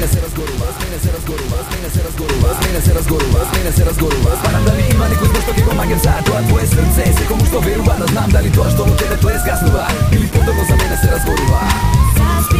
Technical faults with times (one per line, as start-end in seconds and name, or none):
0.00-12.59 low bit depth without dither